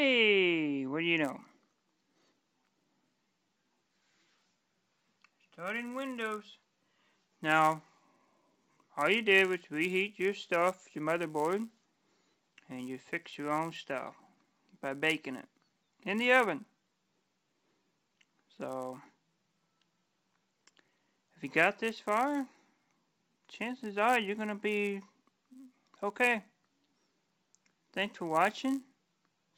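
From 1.23 s to the end, a resampler restarted on every block adds a buzz at 100 Hz. The conversion from 16 kHz to 48 kHz was run on each 10 ms block separately, so every block edge was interpolated without its true neighbouring samples and carries a small error. On the waveform these show as tiny discontinuities every 10 ms. On the spectrogram they form faint vertical striations with a comb of 100 Hz harmonics, present only where there is signal.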